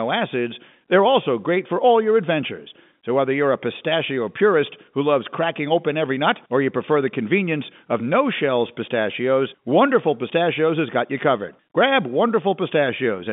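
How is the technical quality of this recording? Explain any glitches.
No glitches can be heard; the speech arrives over an ordinary telephone channel with G.711 mu-law coding at 64 kbps, its band running from 150 Hz to 3.6 kHz, and the signal stays steady and uninterrupted throughout.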